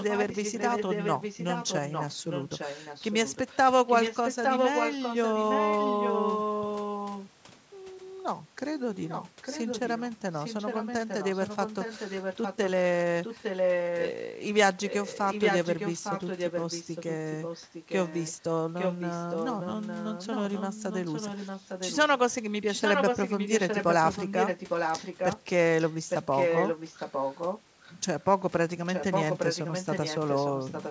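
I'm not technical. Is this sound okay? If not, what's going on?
No. This is likely an echo leak: a speakerphone's echo canceller let its loudspeaker's sound back into the microphone, so a second copy of the speech trails about 0.86 seconds behind, sometimes nearly as loud as the speech itself. It happens at 0 to 7.6, 8.6 to 12.7, 13.2 to 14.1, 14.9 to 18.3, 18.8 to 22.3, 22.7 to 25.4, 25.8 to 27.9, and 28.9 to 30.9 seconds.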